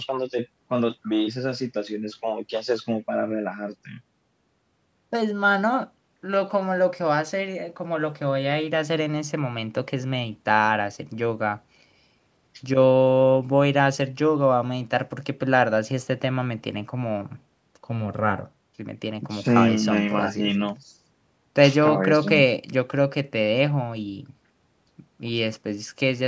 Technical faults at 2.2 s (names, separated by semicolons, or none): none